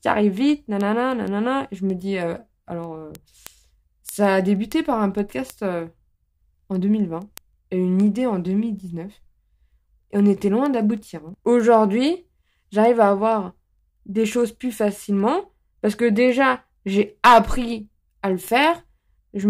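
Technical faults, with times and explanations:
0.18–19.42 s: word clock ticks, about every 0.15 s, as an unlocked receiver clock drifts roughly 150 ppm and slips one sample; thin, evenly spaced vertical lines on a spectrogram.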